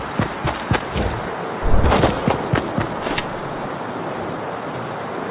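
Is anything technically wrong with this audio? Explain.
No, no technical faults are audible.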